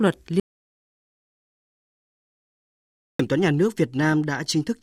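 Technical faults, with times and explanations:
0.40 to 3.19 s, audio dropout to silence: the speech drops into 2.8 s of dead digital silence with no room tone, likely because the input cut out while recording carried on.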